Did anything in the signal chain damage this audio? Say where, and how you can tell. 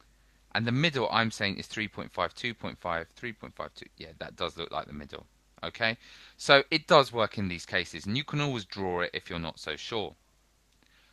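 No, nothing in the chain has hurt this one; it's just gone through a call path doing its ordinary job, with the top end tapering off around 12 kHz in a way that fits an Opus link at 40 kbps.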